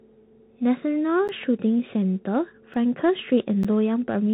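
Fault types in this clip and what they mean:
Bluetooth CVSD headset codec: the one-bit-per-sample headset link cuts everything above about 3.8 kHz, so the speech is dull, with scratchy s sounds and grainy hiss.
Block of digital silence: tiny dropouts at 1.28, 2.74 and 3.63 s, each a tick or dip; the 12 ms ones fit a missed 512-sample buffer.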